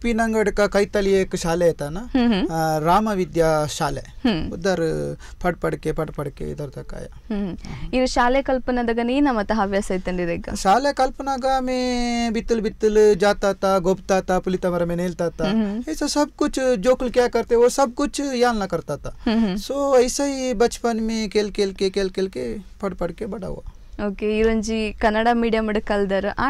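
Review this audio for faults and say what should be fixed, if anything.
Nothing in this audio needs fixing, as no faults can be heard.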